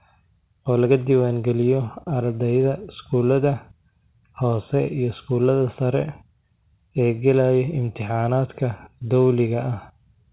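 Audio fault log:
No faults found; the speech carries the band-limited sound of a normally working call path, with nothing above 4 kHz, which fits G.711 mu-law coding.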